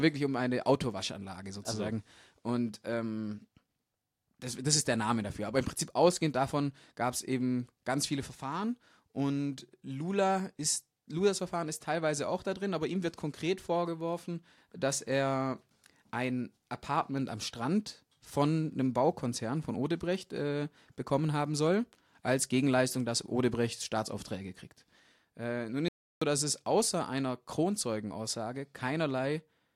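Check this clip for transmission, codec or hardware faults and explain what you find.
One fault turns up near the end. From 25.88 to 26.22 s there's an audio dropout to silence: the speech cuts to dead silence for about 0.33 s, likely a momentary input loss while the recorder kept writing zeros.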